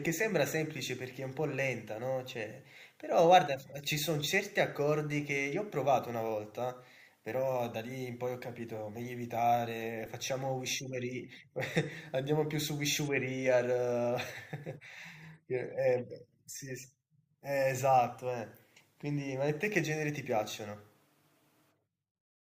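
At 10.06 s the speech has a repeated buffer. Fresh audio failed to reach the output in time, so the device replayed the block it already held, about 2.67 ms long, which fits a 128-sample buffer. That block sounds three times in a row, with a hard edge at each join, and roughly 5 ms of new audio is skipped. Because the repeated piece is so short, it comes across as a brief click or buzz rather than an audible stutter.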